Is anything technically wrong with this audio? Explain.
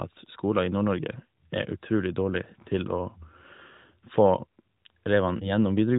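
Yes. A lost AMR speech frame occurs at about 5.38 to 5.50 s, near the end of this narrowband mobile-codec speech. When a frame fails its checksum over the radio link, the AMR decoder fills the gap by reusing the last good pitch and vocal tract settings at reduced gain. Here the damage is a brief dip or warble, which fits a single lost 20 ms frame, before the speech recovers, momentarily weak or rough, within the band-limited, below-4 kHz sound of the codec.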